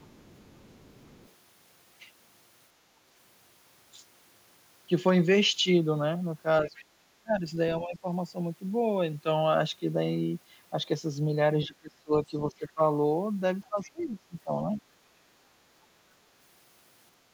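From the start to 1.32 s there's a faint trace of the other side's voice leaking through, about 30 dB under the talker, likely echo the canceller didn't fully remove. It pops up again briefly at 6.66, 13.64 and 14.72 s. Speech is suppressed in double talk at 6.65–8.05, 11.67–12.8 and 13.69–14.66 s. The talker dips by up to about 20 dB, likely because the canceller turned both sides down when they overlapped.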